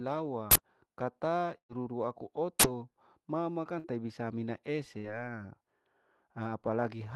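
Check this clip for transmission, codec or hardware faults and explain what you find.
Two kinds of fault are audible: two uninitialised-buffer bursts and three bursts of packet loss, heard through an Opus call path whose high end stops around 12 kHz.

Uninitialised buffer, at 0.51 to 0.56 s and again at 2.60 to 2.64 s: a block was played before audio had been written into it, so stale memory came out as samples. Each event is a sudden, loud burst of digital noise lasting about 43 ms, which fits a 2048-sample block.

Burst of packet loss, at 1.57 to 1.72 s, 3.79 to 3.87 s (just before "bisa mina"), and 4.98 to 5.12 s (just after "bisa mina"): consecutive packets never arrived in time. The receiver stretched and faded the last sound over the gap, then resumed with about 120 ms, 60 ms and 60 ms of speech missing. The first gap ends in silence.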